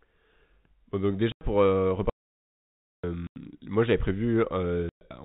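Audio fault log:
1.32–1.41 s, 3.27–3.36 s and 4.89–5.01 s: packet loss filled with silence. Three holes of 90, 90 and 120 ms cut the speech, which fits lost packets of 30 ms each. The first ends just before "pour euh" and the second just before "moi j'avais". Each edge cuts hard from signal to silence. On the waveform these appear as flat-line notches. On the spectrogram they are blank vertical strips.
2.10–3.04 s: audio dropout to silence. Right after "pour euh" the sound stops dead for about 0.94 s and then resumes mid-flow. The gap is silent with no room tone, likely because the input link failed or was muted while the recording kept running. Anything said in that stretch is lost. The waveform shows a long flat line, and the spectrogram shows an empty block under the telephone-band ceiling of 4 kHz.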